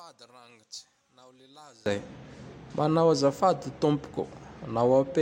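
From 0 to 1.86 s, one channel inverted is likely: reversed polarity cancels the centred speech in mono, dropping it about 26 dB to a faint residue.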